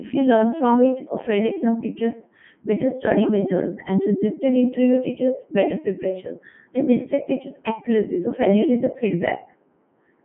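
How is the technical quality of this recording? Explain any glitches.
Poor, because the whole recording has passed through a Codec 2 vocoder. From start to finish the speech sits in a narrow 150 Hz to 3.4 kHz phone-like band, with nothing above 3.7 kHz, and the codec damage is heavy. Instead of keeping the waveform, the decoder rebuilds the speech from sine waves driven by pitch, voicing, energy and a coarse spectral envelope. The result is robotic and buzzy, and the density of the damage fits Codec 2's top 3.2 kbit/s mode. A plain low-pass or band-limited line would dull the speech but leave it natural. The synthetic, tonal buzz is what marks a vocoder.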